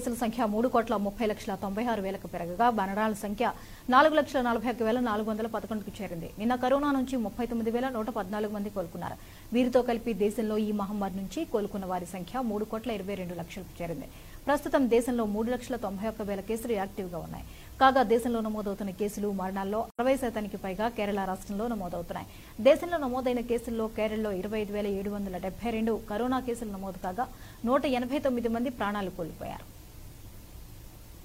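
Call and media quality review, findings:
AAC frame loss with muting at 19.90 to 20.00 s. Soft-edged dropout, about 85 ms. Probable component: AAC decoder concealment. Missing frames decoded as zeroed spectrum. Overlapping windows fade the sound out and back in. Gap length fits two lost frames.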